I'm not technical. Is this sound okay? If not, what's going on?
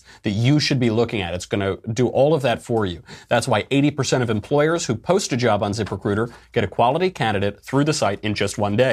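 Yes, the speech shows no technical faults, so there is nothing to fix.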